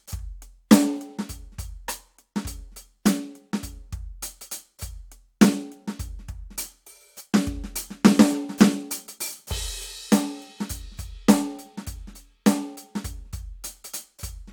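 A short piece of music with no technical faults to report. Nothing in it needs a time or a cause.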